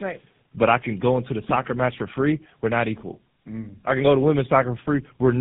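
Tandem speech coding runs through the whole clip. The speech went through three low-rate speech coders in a row. Each re-coded the previous one's damaged output. It sounds rough, muffled and warbly. Nothing reaches above 3.8 kHz, and the last stage sounds like GSM full rate.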